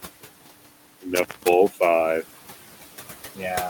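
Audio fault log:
Throughout: noise suppressor artifacts. The room noise sinks about 10 dB between phrases and swells back under the speech, pumping frame by frame instead of holding a steady floor.
1.15–1.53 s: intermittent contact. A loose connection opens for about 0.23 s, cutting the sound with crackle at both edges and faint hiss inside, unlike a clean silent digital dropout.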